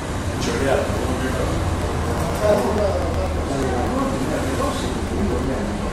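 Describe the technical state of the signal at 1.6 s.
At 1.6 s the signal is in the middle of periodic USB or driver dropouts that run from 0.12 s to 5.80 s. Every 0.121 s, something blocks the USB bus or audio driver and a few milliseconds of audio are skipped outright, with no silence filling the gap. The splice joins two points that don't match, so each loss is heard as a small tick or pop, repeating at a steady rate of about eight per second wherever there is sound.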